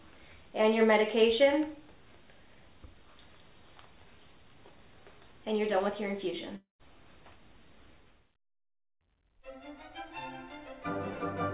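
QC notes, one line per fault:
6.56–6.81 s, long network dropout: the stream likely stopped delivering packets for about a quarter of a second, so 240 ms of audio never arrives. The receiver covers the gap by stretching the last sound into a buzzy fill lasting 233 ms. That fill fades out and leaves 140 ms of near-silence before the audio picks up again beyond the lost stretch. The narrowband G.711 A-law sound, with nothing above 4 kHz, resumes unchanged on the far side.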